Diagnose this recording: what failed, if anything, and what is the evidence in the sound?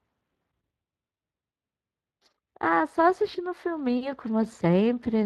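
The failure sits at the codec stage: the speech has been through Speex, a CELP codec from older VoIP and game chat, and the damage is plainly audible for the whole clip. The roughness points to a setting of around 22 kbps. At that rate the excitation signal driving the vocal-tract model is too coarsely quantised to carry the fine detail of the voice, so the speech comes out with a noisy, hoarse grain from start to finish.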